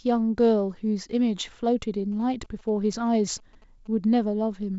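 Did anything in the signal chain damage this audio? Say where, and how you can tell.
Yes. From 2.12 s to 3.88 s a faint galloping dit-dit-dit of short buzzes sits well below the speech, the buzzes pulsing at about 217 Hz. That rhythm is GSM signalling bursts: a nearby 2G phone sending brief groups of radio bursts while signalling to its network. The damage enters in the analogue wiring, where a circuit rectifies the radio energy into audible buzzing. It is carried through the G.722 wideband coding.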